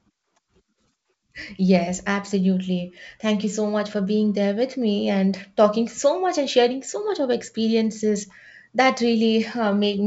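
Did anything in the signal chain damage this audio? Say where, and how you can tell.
No, nothing in the chain damaged this speech; the content stops near 7.7 kHz, which is just the band edge of the G.722 wideband telephone coding it passed through, and the coding itself leaves at most a faint trace.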